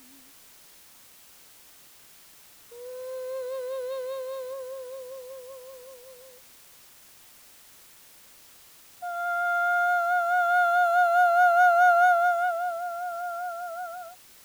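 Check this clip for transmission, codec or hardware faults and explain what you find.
The music has a low bit depth with dither throughout: the signal is likely quantised to about 7 bits after dither is added, which turns the rounding error into a steady, even hiss roughly 30 dB below the music, without distortion.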